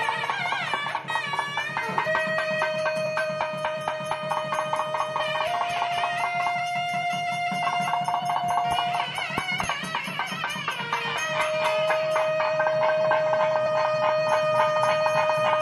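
Compressed frames are skipped at 2.05, 3.05, 5.19, 7.64, 9.60 and 13.65 s. Whole frames never play, being missing or rejected as damaged. The sound jumps ahead each time, by roughly 150 to 300 ms. Each join is abrupt and brief.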